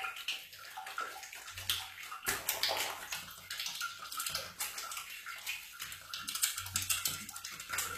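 From start to finish the sound carries plainly audible HE-AAC compression damage, likely from low-bitrate encoding. The treble is synthetic: content above the core band has been rebuilt by copying lower bands upward, so its harmonics do not line up with those below the crossover, leaving high detail gritty and metallic. The spectrum stops near 14.9 kHz, and the overall degradation fits a bitrate around 24 kbps.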